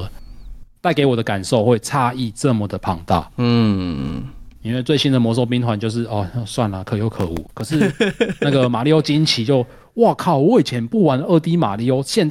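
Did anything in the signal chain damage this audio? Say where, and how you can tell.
Yes. Processor overload crackle runs from 7.16 to 7.69 s, a gritty tearing laid over the speech that stops abruptly once the half-second passes. The damage is at the driver or buffer stage. The processor fell behind and missed the deadline on roughly 15 very short buffers, under a millisecond each. Each miss replayed a stale fragment of old audio with hard edges, and those clustered discontinuities fuse into crackle.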